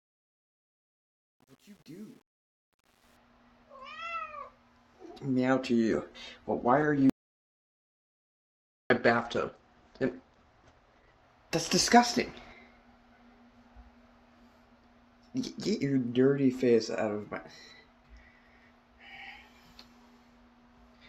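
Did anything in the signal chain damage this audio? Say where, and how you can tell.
Yes. The opening fade-in shows truncation distortion on a fade. From 0.0 to 3.17 s the rising level sounds gritty, worst up to 2.78 s. The gain stage kept only about 9 bits without dither, so quiet samples collapse into coarse square steps.

A call bitrate drop hits the codec from 5.92 to 11.29 s. The encoder fell from 96 kbps to 11 kbps and held the floor for 5.3 s. Top end narrows from 20 kHz to 8 kHz, leaving the sound muffled and rough.

An audio dropout to silence runs from 7.10 to 8.90 s, about 1.81 s. The sound stops dead, with no room tone in the gap. It then resumes mid-flow. The likely cause is a lost input upstream, with silence written meanwhile.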